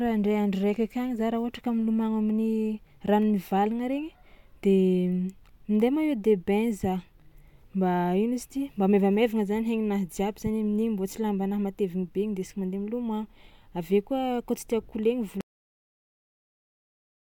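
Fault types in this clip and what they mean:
Cut-off end: the speech stops mid-sound at 15.41 s and drops straight to digital silence, no decay, because the final buffers never got written.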